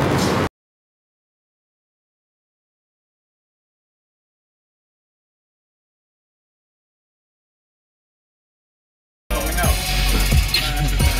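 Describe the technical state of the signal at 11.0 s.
At 11.0 s the signal is intact, with no audible fault at that point.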